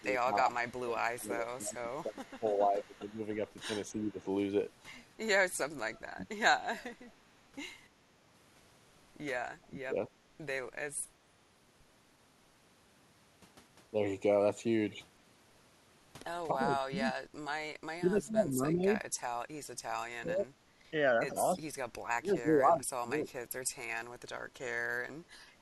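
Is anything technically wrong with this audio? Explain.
Yes. Speech suppressed in double talk occurs at 0.0–4.25 s, 6.03–6.3 s, 9.58–9.97 s, 16.53–23.3 s and 25.15 s to the end. The speech dips by around 20 to 30 dB or breaks up, likely because an echo canceller muted the talker along with loudspeaker echo.

Echo leak runs from 0.71 to 3.13 s. A faint copy of the speech trails by 301 ms, about 25 dB down, likely residual loudspeaker echo the canceller missed.

Background gated by the echo canceller appears between 19.26 and 20.87 s. The canceller clamped the microphone during playback, and the room sound briefly drops by about 13 dB, roughly a fifth of a second in all.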